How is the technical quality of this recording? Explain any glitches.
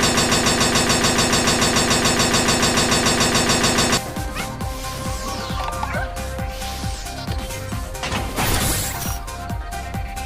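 The recording has one clear fault: a broken-record loop at the start. From 0.0 to 3.97 s, already under way when the clip begins, a 144 ms fragment repeats back to back about 27 times. This is likely a stall in the player, encoder or stream that kept resending its last buffered piece, so the audio that belonged in those four seconds is missing.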